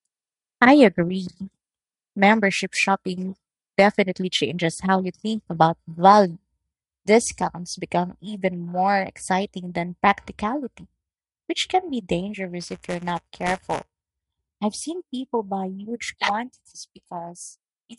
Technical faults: buffer tearing

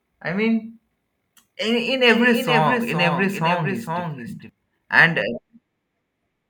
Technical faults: doubled audio track

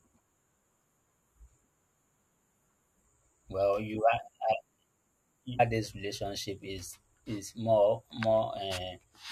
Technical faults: stream segment skipped

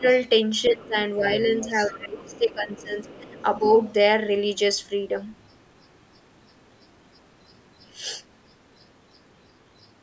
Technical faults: speech suppressed in double talk; other side's voice leaking through

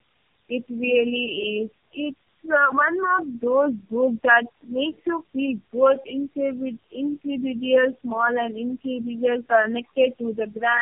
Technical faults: tandem speech coding

